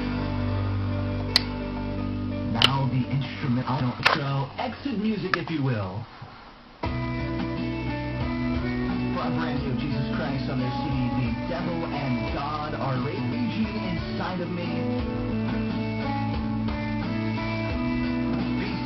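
Short garbled flutters interrupt the audio at 3.61, 6.03, 7.28, 13.04, 15.31 and 18.29 s. These are frames out of order: adjacent blocks of about 186, 139 or 46 ms were decoded swapped, so each stretch plays with its halves exchanged.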